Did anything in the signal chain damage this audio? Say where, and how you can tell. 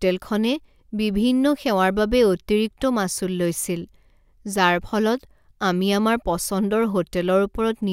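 No, nothing along the chain from capture to playback has left a mark I can hear anywhere in this speech.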